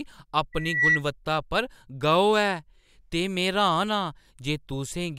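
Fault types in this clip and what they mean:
Loudspeaker feedback squeal: a steady 2 kHz tone rises out of the speech at 0.53 s, swelling over roughly a third of a second to sit a few decibels above the voice, then stops at 1.03 s, just before "पर गौह्". It happens because a microphone is hearing the loudspeaker it drives, and at that one frequency the loop returns more than it sends, so the tone keeps feeding itself until the loop is broken.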